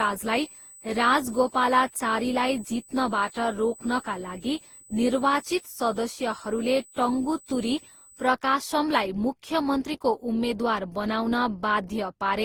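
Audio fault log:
Throughout, generation loss: the speech sounds swirly, smeared and hollow, with blurred consonant onsets, more damage than a single pass at around 48 kbit/s would cause. The likely cause is repeated Opus decoding and re-encoding, roughly ten times, each pass quantising on a shifted frame grid so noise accumulates.
0.00 to 8.27 s, USB whine: a fixed-pitch tone at 8 kHz sits under the speech at about 25 dB below the signal, then stops. That frequency matches 125 microsecond USB microframes, with bus current pulses leaking into the audio through power or ground.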